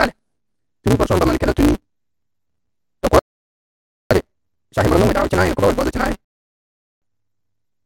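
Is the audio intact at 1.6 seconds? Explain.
No. At 1.6 seconds the speech is affected by a block size mismatch (truncated) that runs through the whole clip. One stage hands over blocks longer than the next stage reads, which fits a 256-sample read, so the tail of every block is discarded. Those regular cuts produce a buzz at 188 Hz, the block rate, and the speech moves 1.88 times faster than normal while keeping its timbre.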